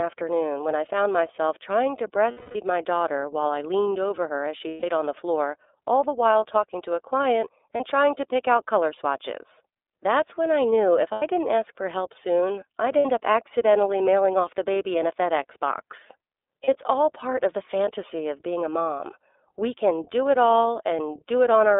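iLBC codec coding runs through the whole speech clip, which is confined to a narrow telephone band of roughly 300 Hz to 3.6 kHz. Each 30 ms block of excitation is coded on its own, with no help from the block before, which fits the 13.33 kbps mode. That independence costs detail, so the damage is plainly audible: the voice stays clear but sounds rough, slightly synthetic and dull.

Lost iLBC frames occur at 2.31 to 2.56 s (240 ms), 4.68 to 4.84 s (150 ms), 7.76 to 7.81 s (30 ms), 11.12 to 11.23 s (90 ms), 12.99 to 13.06 s (60 ms) and 16.65 to 16.69 s (30 ms). The decoder fills each gap by repeating the last pitch cycle with added noise, heard as a held, buzzy or breathy vowel that fades over the longer losses, especially at 2.31 s. Because the frames stand alone, the speech recovers almost immediately.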